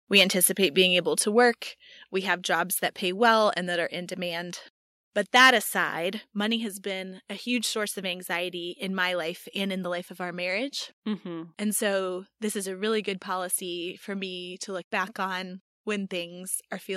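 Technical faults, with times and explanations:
0.16 to 0.45 s and 5.36 to 5.50 s, microphone overload: The loudest peaks are squared off, adding a harsh, crackling edge. The signal tops out at the converter's ceiling, so the waveform's crests are flattened. The first burst runs about 5 dB over, clipping only a small fraction of samples. The second is worse, about 7 dB over, with roughly one sample in twenty clipped. Input volume set too high is the likely cause.
1.02 s, 2.04 s and 6.24 s, microphone volume stepped down: Voice and background drop together, abruptly, about 3 dB each time. The first step falls just before "to work", the second just after "to work", and the third just before "money has been a". The level falls in one jump, with no gradual fade. The likely cause is call software reacting to the hot input by lowering the device's gain.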